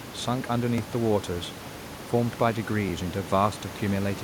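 A sharp tick at 0.78 s in the speech is a block of digital silence: about 2.7 ms dropped to silence with no fade, consistent with a 128-sample output buffer left unfilled.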